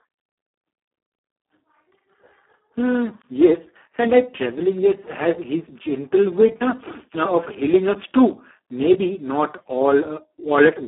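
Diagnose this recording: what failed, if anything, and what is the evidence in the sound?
The failure is at the codec stage: Speex codec damage runs through the whole clip, and it is heavy. The speech sounds hoarse, noisy and close to robotic throughout, because this CELP coder has too few bits to model the excitation. That points to a setting around 4 kbps, near its vocoder-like floor. The band sits between about 250 Hz and 3.4 kHz, with nothing above 3.8 kHz. Simple telephone band-limiting would keep the voice clean, and packet loss would break it at particular moments; here the roughness is continuous.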